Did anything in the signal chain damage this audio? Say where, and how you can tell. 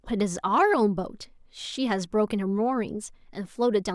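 No, nothing in the signal chain damaged this audio.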